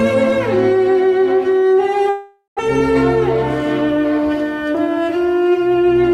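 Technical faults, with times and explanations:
2.09–2.61 s, long network dropout: the sound turns into a fading buzz that ends in about 140 ms of silence, then resumes with around 400 ms simply gone. This is likely a stretch of lost packets, bridged by the receiver and leaving timing shifted by roughly 70 ms.
3.81–4.19 s, jitter buffer speed-up: the audio briefly rushes, running about 115% of normal speed with its pitch unchanged. The receiver, holding too much buffered audio, trimmed repeated pitch-period slices, roughly 70 ms in total, to bring its delay back down.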